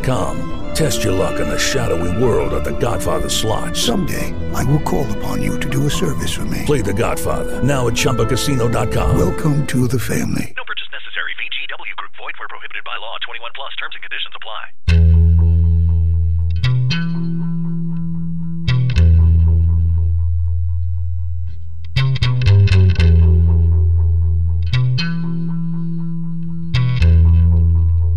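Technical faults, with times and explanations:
Throughout, DC offset: the entire waveform sits displaced from the zero line by a fixed amount of about -21 dBFS, so it rides off-centre for the full length. A constant shift has no frequency, so nothing is heard as a tone. It shows instead as a single spike at 0 Hz and costs headroom on one side. Unlike mains hum or low rumble, which cycle at 50 or 60 Hz or wander below 40 Hz, this energy never oscillates.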